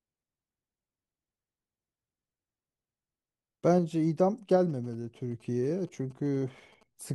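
From 4.70 s to 7.07 s, GSM signalling bursts appear. A nearby 2G phone's brief radio transmissions get rectified by the audio circuitry, giving a galloping dit-dit-dit of short 217 Hz buzzes about 30 dB under the speech. Steady hum never gallops like this.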